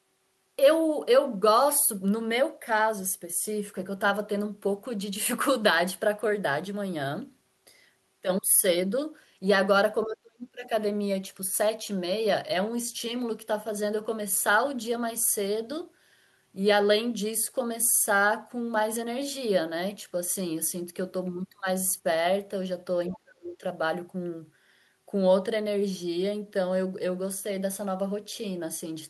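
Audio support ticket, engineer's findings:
Speech suppressed in double talk, 10.04 to 10.71 s and 23.12 to 23.63 s. Talker's level collapses, deepest dip roughly 30 dB in the first event, nearer 35 dB in the second. Each lasts well under a second. Likely component: echo canceller / residual echo suppressor. Mechanism: both ends active at once, canceller can't tell near talker from loudspeaker return, attenuates the whole mic path. Talker is ducked with the echo.

Other side's voice leaking through, 23.14 to 23.18 s, inside the second suppression window. Brief faint scrap of a second voice, around 25 dB below the talker. Likely component: acoustic echo canceller, incomplete cancellation. Mechanism: far-end audio from the device loudspeaker re-enters the mic. Filter misses part of it during double talk. The residue passes upstream as a short fragment.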